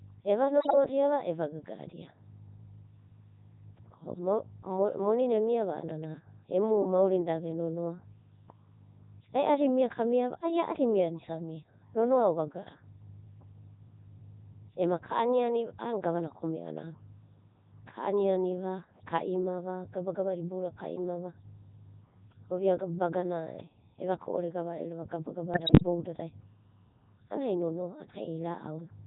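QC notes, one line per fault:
Throughout: Codec 2 vocoder, heavy damage at 3.2 kbit/s. The speech comes back robotic and buzzy because the decoder rebuilds it from sine waves driven by pitch, voicing, energy and a spectral envelope, so none of the original waveform survives. Unlike ordinary low-bitrate codec smearing, the whole voice has a synthetic, steady-state sheen even in clean stretches, and anything other than a single voice turns to mush.
0.60 to 0.75 s and 25.54 to 25.83 s: bit errors on digital voice radio, at roughly 7% and 5% bit error rates respectively. Flipped bits land in frames where each bit sets pitch, level, voicing or spectral shape, so the synthetic voice lurches in pitch and loudness and breaks into bleeps, warbles and gibberish. The second burst runs longer, about 0.3 s against 0.15 s. What separates this from the constant vocoder buzz is its abrupt, frame-by-frame jumping confined to these short bursts.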